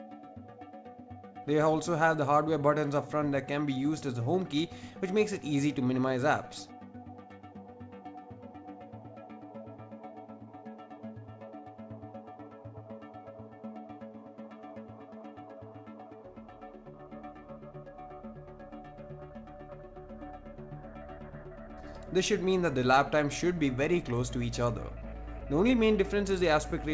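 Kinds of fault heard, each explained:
Clock drift between sender and receiver: the sending device's audio clock runs roughly 3% slow relative to the receiver's, so the jitter buffer keeps draining and the receiver has to stretch the stream. This produces small, unevenly spaced timing hiccups through the whole clip.
Repeated timing corrections: the receiver keeps inserting short repeated pieces from 0.04 s to 26.83 s to keep pace with the slow sender, adding about a second in total. Playback runs at 97% speed, each edit small.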